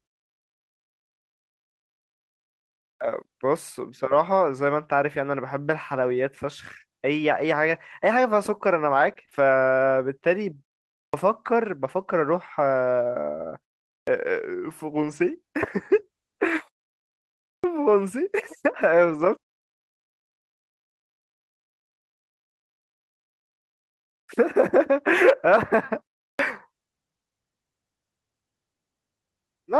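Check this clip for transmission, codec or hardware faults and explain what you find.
Three kinds of fault are present, all from the playback and network path.

Clipped start after a pause: the output device, having gone idle, wakes too slowly at 2.95, 11.07, 14.02, 17.58, 24.23 and 26.33 s, swallowing about 55 to 65 ms, so speech begins abruptly.

Scattered short gaps: between 7.67 and 9.35 s about three packets went missing, each hole under roughly 20 ms, patched by extending prior sound, leaving small ticks or hiccups.

Lost packet rebuilt from error correction: lost packets were replaced by low-bitrate copies carried in following packets, at 14.83–15.33, 16.47–16.61 and 18.97–19.23 s, so those stretches sound rougher and noisier, without gaps.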